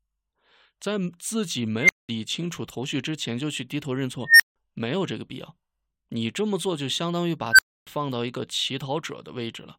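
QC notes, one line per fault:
1.80–2.09 s, 4.26–4.56 s and 7.51–7.87 s, unstable filter: each time a tone near 2 kHz (nearer 1.5 kHz in the last) swells to a loud squeal within about 80 to 140 ms, clips, then drops into silence of 200, 160 and 280 ms. A recursive filter with bad coefficients feeds its output back until it grows without limit, then the values overflow and the sound cuts out until the filter resets.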